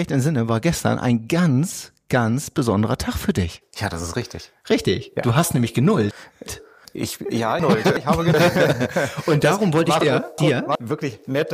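At 6.11 to 6.85 s, 7.60 to 8.34 s and 10.01 to 10.75 s, frames arrive out of order: two adjacent blocks of about 371.5 ms swap places, which fits runs of four frames. Each stretch plays as a garbled flutter. No time is lost.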